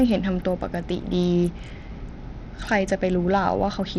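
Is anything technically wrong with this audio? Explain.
Yes. Throughout the speech, the treble drops out and flickers, with gritty noise riding on top. This is likely Bluetooth SBC compression at a low bit allocation, roughly 80 kbps.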